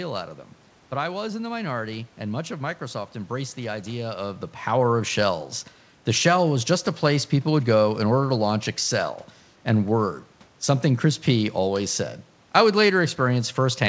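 No technical faults are audible.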